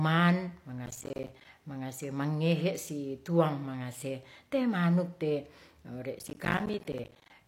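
Processor overload crackle breaks into the speech from 0.86 to 1.45 s, and again from 6.19 to 7.3 s. The processor falls behind and misses buffer deadlines in quick succession. Each miss drops a short slice of silence with hard edges. The gaps are around 10 ms, which fits a buffer of roughly that length. Dozens of them pile up in each burst. The result is a gritty, tearing crackle over the speech. It stops once the load eases.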